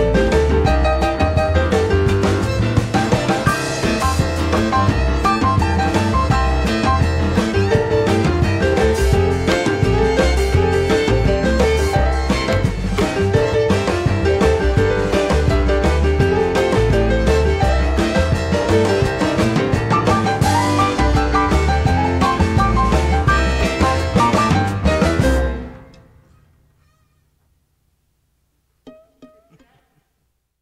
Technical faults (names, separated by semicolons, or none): none